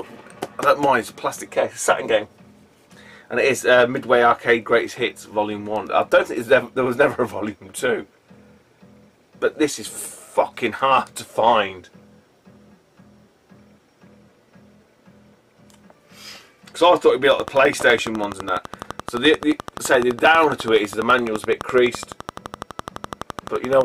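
A train of clicks runs from 17.31 s to 23.82 s, a regular ticking at about 11.9 clicks per second, some seventy pulses in all, each with much the same sharp shape. The steady pace points to a repeating external disturbance, likely electrical interference from nearby equipment or a faulty connection or power supply. The clicks stand out around 10 dB above the sound itself, so they pop clearly over it and remain audible in any quieter stretches.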